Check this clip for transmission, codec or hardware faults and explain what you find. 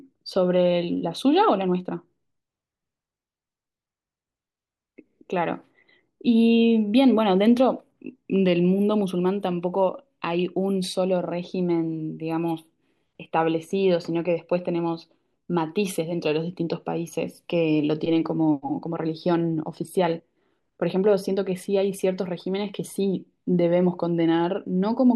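Nothing in the speech points to a transmission, codec or hardware fault.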